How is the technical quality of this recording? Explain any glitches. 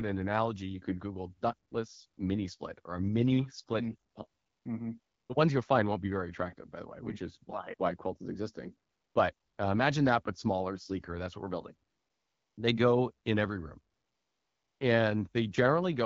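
The recording has one recurring glitch: AMR comfort noise in the pauses. The speech has the clarity of HD Voice coding at a wideband rate around 12.65 kbit/s.

AMR comfort noise occurs nine times, from 1.69 s to 14.79 s, in gaps of 20 ms to 860 ms. There is a brief one just before "mini split or a" at 1.69 s. The longest follow "what we're building" (11.89 to 12.57 s) and "go in every room" (13.93 to 14.79 s). The phone judged these gaps silent and stopped sending speech frames, so the receiver synthesized a smooth, steady hiss. Unlike a gate dropout, the gaps aren't silent. The real background switches to featureless noise and back.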